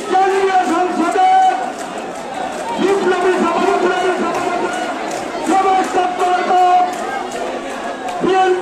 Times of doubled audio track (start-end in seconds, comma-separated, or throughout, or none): 2.36-5.86